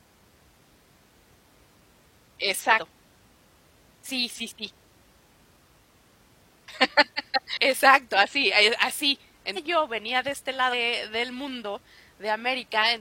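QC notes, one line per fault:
2.74–2.79 s, 7.53–7.57 s, 9.52–9.58 s, 10.68–10.74 s: damaged data in a compressed stream. Corrupt bytes make the decoder misread frames and lose sync while it hunts for the next valid header, so the speech breaks into a brief chirp, squawk, click or short hole of about 50 ms each time.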